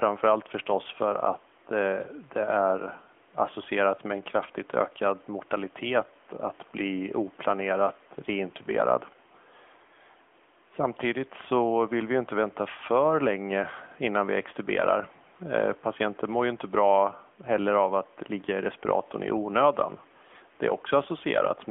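Speech runs through an AMR narrowband mobile codec for the whole clip. Nothing reaches above 3.4 kHz or below 150 Hz. The voice sounds plainly buzzy and synthetic, which fits a 10.2 kbps mode. Room noise sits about 32 dB below the speech.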